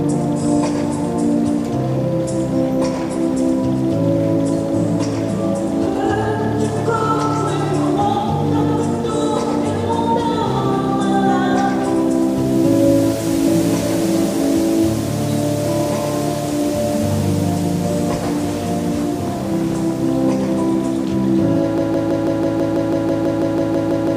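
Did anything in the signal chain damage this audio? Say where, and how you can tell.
Yes: a broken-record loop from 21.78 s to the end, where a 0.16 s fragment repeats about 15 times, likely a stalled player or stream resending its last buffer.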